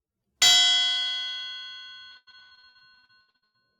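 An everyday sound recording with repeated packet loss (robotic sound) from 2.11 to 3.56 s: rapid gaps up to about 100 ms, half patched by repeating sound, giving choppy stutter rather than one clean dropout.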